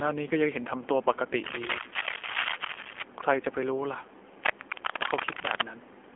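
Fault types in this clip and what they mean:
AMR narrowband mobile codec: The whole clip passes through a narrowband mobile speech codec. Nothing above 3.5 kHz survives, and the band sits roughly between 300 Hz and 3.4 kHz. The speech sounds plainly buzzy and synthetic, which fits a low rate near 7.4 kbps.
cable scratch noise: Dense, uneven bursts of scratching noise run from 1.44 to 3.03 s and from 4.44 to 5.66 s. They are roughly as loud as the speech. The likely cause is a worn cable or connector being moved, rapidly changing its contact resistance.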